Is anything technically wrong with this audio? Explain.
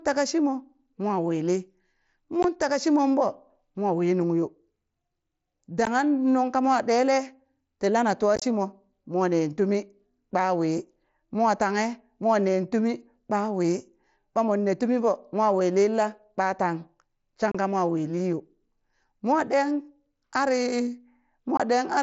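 Yes, there's unconcealed Bluetooth headset packet loss, with five dropouts at 2.43 s, 5.85 s, 8.36 to 8.42 s, 17.52 to 17.55 s and 21.57 to 21.60 s. Voice packets between headset and phone went missing, and nothing filled the gaps, so silence or an idle pattern sits where the speech should be. The short holes run 15 ms to 30 ms, fitting 7.5 ms headset frames, with hard edges. The 8.36 s event is rougher: 45 ms of holes scattered over 60 ms, the longest about 22.5 ms, giving a brief chopped crackle over the wideband mSBC sound.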